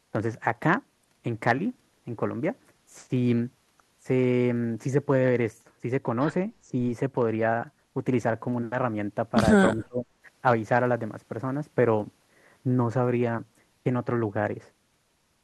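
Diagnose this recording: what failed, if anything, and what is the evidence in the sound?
Call processing failed. From 9.74 to 10.08 s the speech falls away sharply, roughly 30 dB down at its deepest. This is speech suppressed in double talk. An echo canceller likely mistook the talker for far-end echo and attenuated both.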